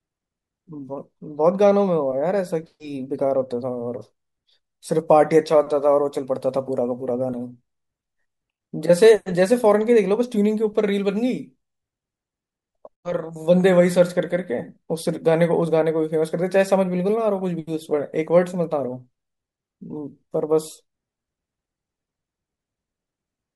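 A speech recording with no technical fault anywhere in it. Nothing in the signal calls for a time, a value or a cause.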